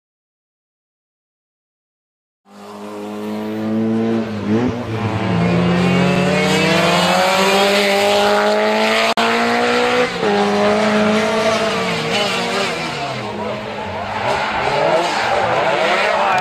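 At 9.13 s the sound cuts out and comes back at 9.18 s, a gap of about 46 ms. That's most likely a Bluetooth dropout: packets didn't reach the headphones in time, so the output went quiet until good ones arrived. The length fits a couple of lost frames. When the sound returns it has moved on, as if it had kept playing through the gap, so that stretch is simply skipped.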